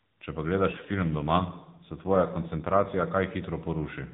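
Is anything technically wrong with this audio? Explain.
Yes. From 0.70 to 3.09 s there is an AMR rate drop. The speech turns rougher and more synthetic, with no gap and no change in bandwidth. That fits the narrowband mobile codec being pushed from 12.2 kbps down to about 5.9 kbps, leaving fewer bits to model each frame.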